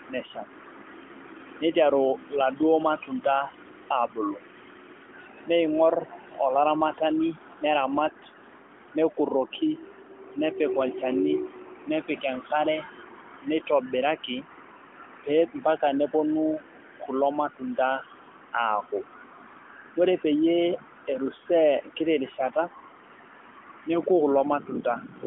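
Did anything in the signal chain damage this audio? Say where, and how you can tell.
No, nothing in the signal chain damages this speech recording. What you hear is the AMR narrowband mobile codec working as intended: the line band runs from about 250 Hz to 3.4 kHz with nothing above 4 kHz, and the light coding texture fits AMR-NB at its 12.2 kbps rate.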